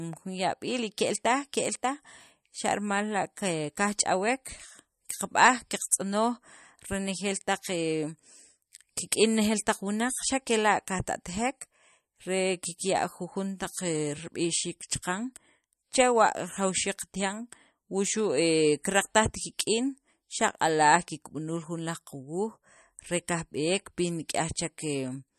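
Throughout, the speech has a hard treble ceiling near 13.1 kHz and plainly audible watery swirl on sibilants, likely MP3 compression at a low bitrate near 43 kbps; the swirl distinguishes it from a simple low-pass filter.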